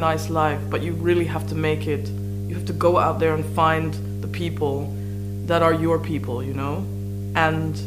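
A strong mains hum runs through the whole recording, a steady 50 Hz tone with low harmonics, nearly as loud as the wanted sound, from a ground loop or nearby transformer coupling the power line in. On a spectrogram it is a bright horizontal line at 50 Hz with fainter lines above, and the waveform shows a regular low-frequency ripple under everything. There is also low bit depth with dither: a constant, even hiss with no distortion, which fits about 9 bits with dither added before rounding so the rounding error becomes white noise. It sits far below the signal and appears as a uniform haze across all frequencies on the spectrogram.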